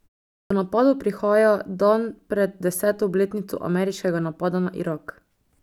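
At 0.40 s, after 0.4 s of silence, the speech bursts in with its first 0.10 s gone before "napadov prihaja dan pred". This is a clipped start after a pause: the idle output device woke too slowly. Unlike muted pauses, actual speech is lost, not just background.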